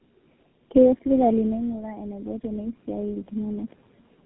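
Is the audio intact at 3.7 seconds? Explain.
No. At 3.7 seconds the automatic gain is still rising. It runs from 1.34 to 3.78 s, climbing about 8 dB after the talker moved away near 1.5 s and the level fell about 13 dB. Unlike the talker simply coming closer, the room noise swells along with the voice, slowly rather than at once.

Tandem speech coding is also present throughout the clip. The speech was decoded and re-encoded at several link borders, which fits three speech codecs in a row ending in GSM full rate. Each stage degraded the previous one's output, so the sound is rougher and more warbly than a single narrowband codec would leave it. Nothing is present above 3.8 kHz.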